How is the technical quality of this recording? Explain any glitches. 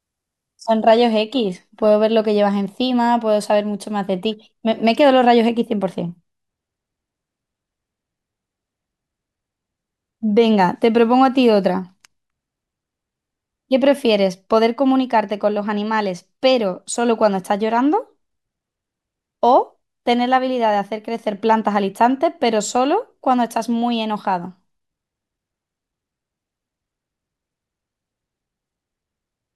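One glitch, at the start. From 0 to 2.0 s, an adaptive stream starting at a low bitrate: the player opens on a low-quality version until it gauges the connection. The speech sounds dull with synthetic treble, which fits HE-AAC at about 20 kbit/s, then jumps to full clarity, consistent with 96 kbit/s AAC-LC. Unlike a dropout, there is no gap.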